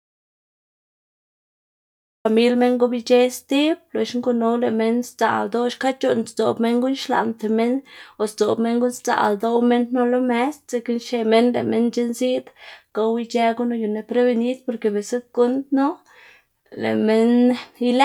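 From the very start of the clip until 2.25 s there is an audio dropout to silence: the recording opens on complete silence, with no room tone or hiss at all, and the speech only arrives at 2.25 s, entering abruptly mid-flow rather than fading in. The input was likely lost before the clip began, through a disconnected source, a broken link or a mute, while the recorder kept writing silence. Whatever was spoken in that first stretch is unrecoverable.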